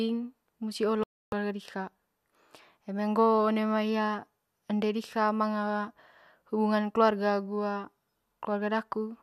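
Just after the one-second mark, from about 1.03 to 1.33 s, there's a digital broadcast dropout in the speech. The receiver stopped getting frames it could trust, either because the signal dropped or because they failed their checks, so it muted rather than play garbage. You hear the audio cut out for roughly 0.29 s, a gap that fits around a dozen lost frames. The speech picks up later, and whatever was sent during the hole is gone.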